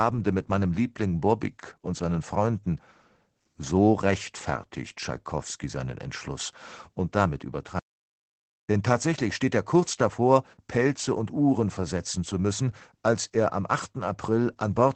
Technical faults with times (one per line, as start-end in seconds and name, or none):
0.00-14.95 Opus voice compression
7.79-8.69 audio dropout to silence